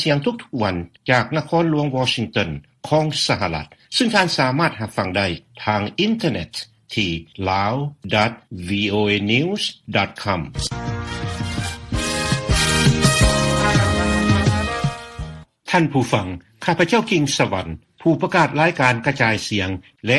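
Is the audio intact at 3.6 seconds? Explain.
Yes, the audio is intact at 3.6 seconds, with no dropout, click, distortion or other fault audible at that point.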